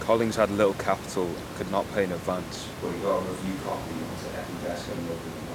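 At 2.56 s, right after "could not pay an", the speech abruptly turns roomy and hollow, with thinner bass, and stays so to the end at a roughly unchanged level. This is a switch to a distant microphone, likely after the close microphone's feed dropped out.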